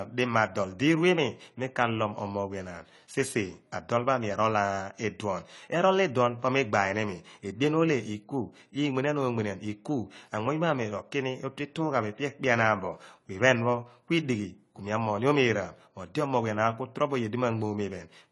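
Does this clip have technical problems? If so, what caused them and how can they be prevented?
Yes. Throughout the speech, nothing is present above 11.5 kHz, and the sound is dull and smeared with a warbling, fizzy texture on sibilants, likely from AAC compression, which fits a low bitrate near 32 kbps. Encoding at a higher bitrate would prevent it.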